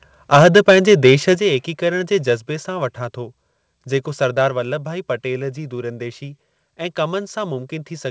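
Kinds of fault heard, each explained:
Microphone overload: The microphone input level was likely set too high for the converter, so the loudest peaks were driven about 8 dB past its ceiling and had their tops sheared flat. Between 0.33 and 1.14 s a small share of the waveform is clipped, and the loudest syllables there pick up a harsh, gritty crackle instead of clean, rounded attacks.
Microphone volume stepped down: Right after that distorted stretch, the call software likely reacted to the clipping by dropping the device's input gain in a single step. At 1.35 s the whole signal, speech and background alike, falls by about 7 dB at once. It is an abrupt jump rather than a gradual fade, heard through a call path that carries nothing above 8 kHz.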